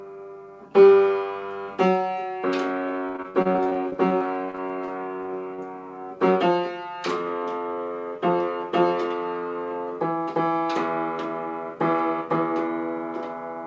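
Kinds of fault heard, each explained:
Repeated packet loss (robotic sound): Between 3.08 and 5.60 s, over twenty short holes open one after another, each patched by stretching the preceding sound. The patches add up to about 560 ms, with around 400 ms of real audio lost and the longest hole 63 ms, so roughly a fifth of that stretch is concealment. The result is choppy. Unlike a single dropout, the damage recurs densely rather than once, and content is missing, not just muted.
Jitter buffer speed-up: From 11.46 to 12.22 s, the receiver trims tiny pitch-period slices to drain excess buffered audio, cutting roughly 70 ms in total. The sound runs about 6% fast and feels slightly hurried, with no gaps and no metallic patching. Unlike a resampling or clock-rate error, the pitch stays put while only the pace rises. Through the G.722 call path at 64 kbps, the band stops at 8 kHz.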